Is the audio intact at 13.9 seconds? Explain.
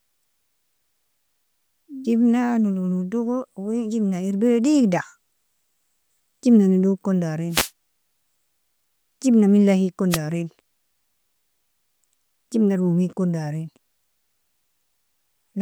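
Yes, the speech at 13.9 seconds comes through intact, with no audible fault at that moment.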